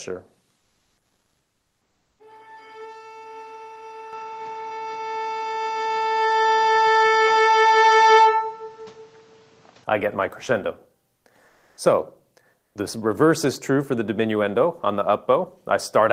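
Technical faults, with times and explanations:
0.57 to 2.19 s, comfort noise in place of the background: the real room sound drops out for about 1.6 s, replaced by flat, featureless hiss about 2 dB quieter, likely Opus DTX filling a pause.
4.13 to 9.84 s, input switched to a poorer device: with no gap, the sound turns dull, nothing above 7.8 kHz, noticeably louder, with a fresh noise floor, likely a change of microphone.
11.15, 11.47 to 11.77 and 12.59 to 12.75 s, comfort noise in place of the background: short pauses of 100, 300 and 160 ms again get smooth synthetic noise instead of real background, likely the same DTX behaviour, at most about 2 dB quieter.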